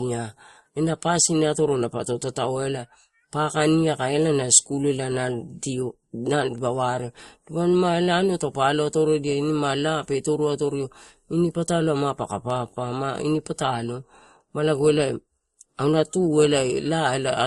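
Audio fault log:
throughout, transcoding between lossy codecs: nothing reaches above 12 kHz, and there's a mix of swirly, smeared detail in the highs with a grainy, washed texture on top, two different flavours of artefact sitting together. That pattern likely comes from a lossy encode being re-encoded by another codec, something like an MP3 at around 48 kbit/s followed by Opus at a similar rate. The second pass wastes bits on the first one's damage and adds its own, and the 12 kHz ceiling carries through.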